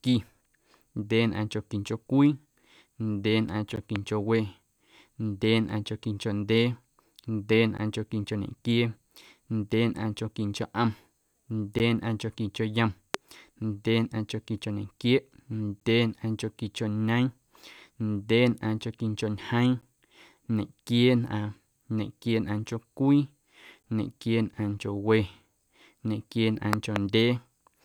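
Right at 3.76 s you get the first gap between chunks, a hard-edged hole of about 13 ms, and it recurs every 4 s, at 7.77, 11.79, 15.80, 19.81 and 23.83 s. The audio is arriving in 4-second blocks with a little silence left at each join. Just after the first gap, from 3.96 to 3.98 s, there's a loud pop sitting on top of the speech, peaking about 15 dB above it. A second loud pop comes at 13.14 to 13.17 s, around 25 dB up. Then from 26.73 to 26.98 s there's a pair of pops in quick succession at about 20 dB. Those are likely voltage spikes from a switch, plug, static or driver glitch, and the speech keeps going underneath each one.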